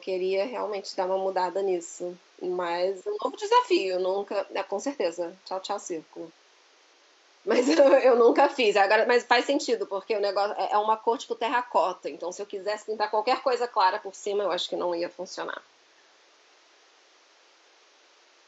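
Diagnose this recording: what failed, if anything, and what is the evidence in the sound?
Nothing in the signal chain has failed: the speech sits well above the room noise, which stays about 35 dB below it and belongs to the recording space rather than to any stage of the system.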